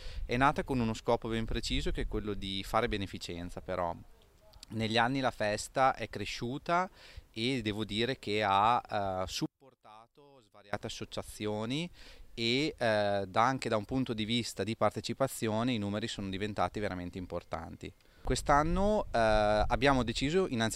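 From 9.46 to 10.73 s the sound drops about 27 dB to a faint residue. On a waveform this shows as a sudden near-flat stretch. The likely cause is one channel inverted, so the shared centre content cancels when summed to mono.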